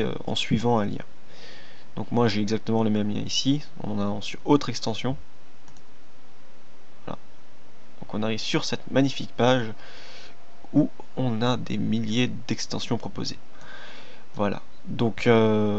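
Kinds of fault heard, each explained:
No technical faults are audible.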